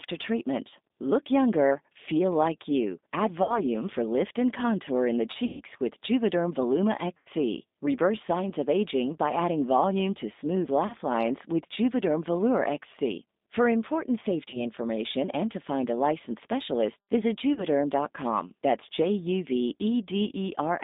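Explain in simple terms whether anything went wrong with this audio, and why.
Yes, two things went wrong. The whole clip runs through the G.729 codec, a phone-call squeeze that cuts the highs and leaves the voice a bit rough and synthetic. Then there's VoIP packet loss concealed by the speech codec at 3.43, 5.45, 7.17, 10.87 (after "adding volume to smooth"), 14.5 (before "information and to find") and 17.54 s (after "a licensed specialist visit"). Bits of the call went missing, between 30 and 150 ms each, and the decoder papered over them with a stretched, fading guess.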